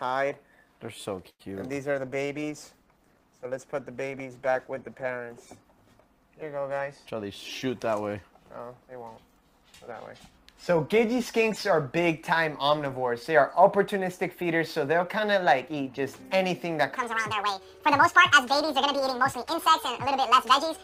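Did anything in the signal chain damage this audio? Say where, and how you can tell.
Yes, in four places.

Around 1.29 to 1.42 s there's a call audio freeze, on the network and jitter buffer side. The last bit of sound gets stretched into a fading buzz that drops to silence for about 60 ms. When audio resumes, nothing has been skipped. About 102 ms was padded in and the delay grew by that much, so it's most likely delayed packets that drained the buffer.

From 1.93 to 5.54 s there's a call bitrate drop at the codec. The sound goes coarse and duller, with the top end thinned out, for about 3.5 s. That fits the bandwidth estimate falling and the encoder being pushed from 32 kbps down to 13 kbps, which forces much rougher quantisation and a narrower band until the rate recovers.

Between 7.65 and 8.15 s there's a jitter buffer speed-up. The audio runs at about 111% speed with the pitch unchanged, so it sounds briefly hurried. 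The buffer had built up excess audio and the receiver trimmed it back by dropping short pitch-period slices one after another. Around 70 ms was cut in total.

From 16.97 s to the end there's a section at the wrong speed. Everything plays 1.72 times too fast, and the pitch jumps up about ten semitones at the same instant. Because speed and pitch move together, this is a playback or editing stage. The likely cause is that section being clocked at the wrong sample rate.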